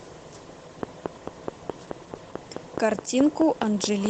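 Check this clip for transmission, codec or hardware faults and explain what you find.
Two faults are audible: codec damage throughout and a regular click train.

Opus voice compression runs the whole clip. Hybrid coding splits the band, and the plainly audible roughness fits about 16 kbps.

A train of clicks runs from 0.83 to 4.07 s. About fifteen similar pops arrive regularly, 4.65 per second, roughly 20 dB above the speech. Equipment interference is the likely cause.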